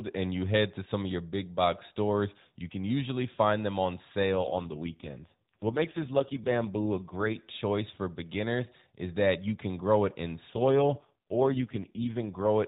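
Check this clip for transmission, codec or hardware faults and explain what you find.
One kind of fault, heard twice, in speech carried over a narrowband mobile codec path that shows light coding damage at its normal rate.

AMR rate drop, 4.32 to 7.37 s (after "usually find them on", before "choice for beginners is") and 10.54 to 12.47 s (after "can grow it in"). The codec switches to fewer bits, which fits a step from 12.2 down to 4.75 kbps. Speech turns rougher and more synthetic, with no gap and no change of band.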